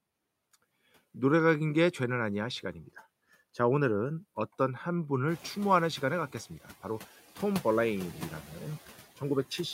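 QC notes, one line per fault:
Throughout: noise suppressor artifacts. The suppressor judges, frame by frame, which bands hold steady background noise and lowers them by about 13 dB, so the noise floor sinks in the gaps between phrases and comes back up underneath the speech whenever those bands are needed. Unlike a one-off adaptation lag, this pumping is constant across the whole clip and follows the speech rhythm rather than any change in the room.
5.27 to 5.5 s: noise suppressor catching up. Around the middle of the clip the room noise jumps by about 18 dB, to about 20 dB below the speech, and the suppressor's noise estimate is still set for the quieter level, so at first it removes only about 5 dB and the louder noise comes through. Over 230 ms the estimate adapts and the noise drops away. What sets this apart from the steady artifacts is a single brief swell that fades once, tied to that rise.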